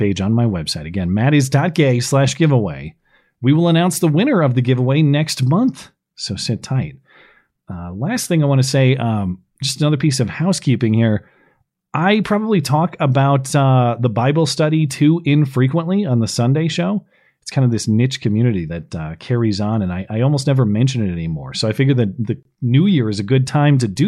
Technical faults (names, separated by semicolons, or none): gap at a join of encoded pieces